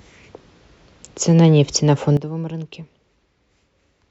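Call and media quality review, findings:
Sudden gain jump at 2.17 s. Speech and noise floor drop together by about 14 dB and stay down to the end. Likely an unramped digital gain step.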